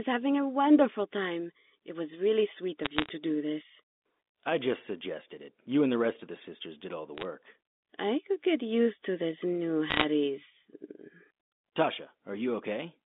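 Speech over a G.711 telephone line, band-limited to about 200 Hz to 3.6 kHz, carries bursts of crackle from bit errors on a digital phone line at 2.82–3.09 s, 7.18–7.25 s and 9.90–10.04 s. Flipped bits corrupt single samples into sharp ticks, densest in the last burst.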